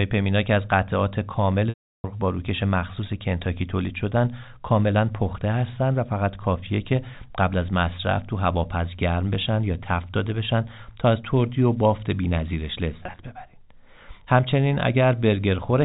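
At 1.69 to 2.04 s, packet loss with pitch repetition removes about 350 ms of audio. The receiver repeats the last pitch period, which fades over about 50 ms into silence before the sound cross-fades back. On a spectrogram, flat, frozen harmonics give way to a blank gap. At 13.03 to 13.19 s, 90 ms is lost in runs of up to 20 ms spread over 160 ms. These sound like brief, buzzy held fragments and show as short, flat, ragged patches in the waveform, all within the 4 kHz telephone band.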